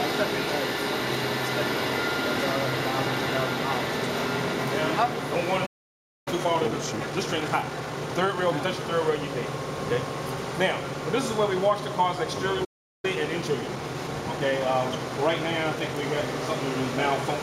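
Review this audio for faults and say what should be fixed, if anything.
Playback stall at 5.66 to 6.28 s and again at 12.64 to 13.05 s. The sound cuts out mid-flow, falling silent for about 0.6 s the first time and about 0.39 s the second, before resuming. The likely cause is the player's output running dry, either because incoming data did not arrive in time or because the audio thread was blocked, so nothing was written to the device until it recovered.

Time-compressed catch-up from 6.28 to 8.68 s and from 13.05 to 16.05 s. Right after each gap the audio runs hurried, about 1.25 times normal speed after the first stall and 1.1 times after the second, while keeping its normal pitch. The player is trimming the backlog that built up during the silence by removing short slices and cross-fading across the joins.

To fix both, give the playback thread a larger, protected buffer with real-time priority so it never starves, and if catch-up is still needed, use gentler, longer-spread compression.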